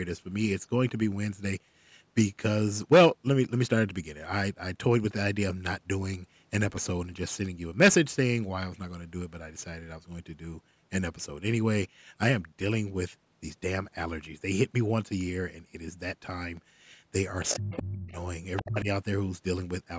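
From 16.43 to 17.29 s there are CD scratch ticks: seven tiny clicks, the longest a couple of milliseconds, at a steady rate of about eight a second. A blemish on the disc destroys more data than error correction can rebuild on each revolution, so the player patches or mutes a few samples every turn. The strict periodicity sets these apart from random digital clicks or packet-loss glitches, which don't keep a revolution-locked rhythm.

At 17.49 to 17.57 s, 17.73 to 17.82 s and 18.56 to 18.68 s, short fragments of a second voice come through, at about 10 dB, 20 dB and 10 dB below the main speech. This is the other side's voice leaking through. The likely cause is an echo canceller leaving some of the far end's loudspeaker sound in the microphone signal. Unlike crosstalk between lines, these scraps appear only in brief bursts, around the moments when both parties seem to be speaking.

Right alongside those bursts, the main speech is speech suppressed in double talk. 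It drops by about 30 dB over roughly half a second from 17.57 to 18.10 s, and by about 25 dB for around 0.3 s from 18.61 to 18.88 s. This is likely an echo canceller that could not separate the near talker from the echo and turned both down. It differs from a network dropout because the gaps line up with the leaked voice rather than falling at random. Throughout, the audio is limited to about 8 kHz by the call's microphone path, which is not a fault.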